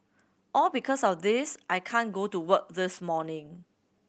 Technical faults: none

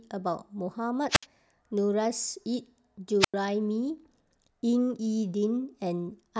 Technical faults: wireless microphone squelch dropout

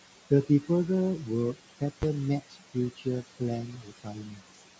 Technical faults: noise suppressor artifacts; invalid numbers at full scale; speech cut by the noise suppressor

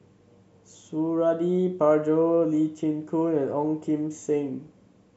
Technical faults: none

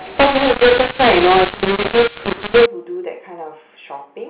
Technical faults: mu-law and A-law mixed up

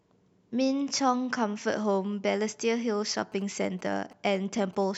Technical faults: GSM signalling bursts

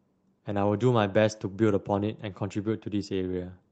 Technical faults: none

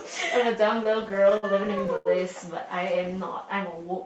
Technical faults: repeated stalls (stutter); jitter buffer slow-down

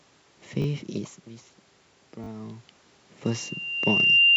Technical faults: repeated buffer; loudspeaker feedback squeal

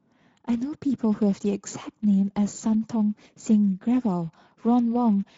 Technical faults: Speex codec

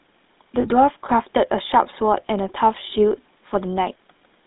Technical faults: GSM full-rate codec; lost GSM frames

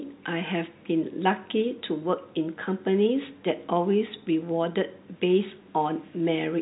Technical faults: none

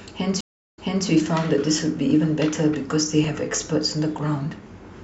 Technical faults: stream reconnect; dropped samples

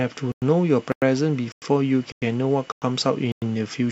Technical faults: gap between chunks

